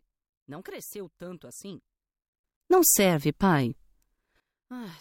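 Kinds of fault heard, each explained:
Sudden gain jump: at 2.44 s the sound and its background noise leap up together by about 20 dB with no fade, holding there until 4.4 s. This is likely a digital gain setting applied instantly from one sample to the next rather than ramped.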